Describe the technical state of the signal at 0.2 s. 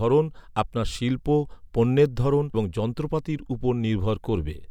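At 0.2 s the speech signal is intact, with no audible technical fault at that moment.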